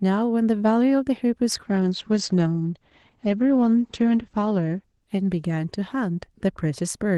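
At 1.52 s there's a call bitrate drop: the Opus stream slides from around 32 kbps to 10 kbps, bottoming out for about 2.5 s. Coarser coding and the top end narrowing from 12 kHz to 8 kHz leave the speech rough and muffled until 6.59 s.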